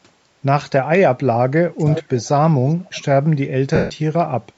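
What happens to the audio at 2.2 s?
From 1.9 to 2.28 s there is an echo leak. A delayed copy of the speech arrives about 0.4 s late, roughly 10 dB quieter, likely from a loudspeaker echo the canceller missed. At 2.24 to 2.29 s, the speech is briefly suppressed in double talk. It dips by about 10 dB for around 50 ms, likely because the canceller turned down its own talker along with the loudspeaker echo.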